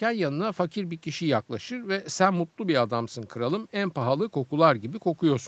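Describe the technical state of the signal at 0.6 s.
At 0.6 s the speech is intact, with no dropout, clipping or other fault, only the ordinary call microphone processing that trims the deepest bass and leaves nothing above 8 kHz.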